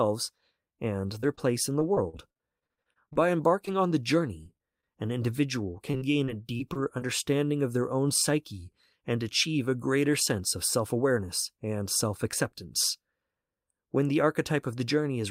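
Repeated packet loss (robotic sound) runs from 1.01 to 3.69 s, ending just before "on the". Short dropouts of up to 39 ms keep arriving, each papered over by stretching the preceding sound, so about 13% of the stretch is patched, giving choppy speech with pieces missing.

Scattered short gaps follow from 4.43 to 7.03 s, starting just after "on the". Around ten isolated holes, the longest roughly 40 ms, are each filled by continuing the last sound, leaving the speech clear but marked by brief ticks, smears and hiccups.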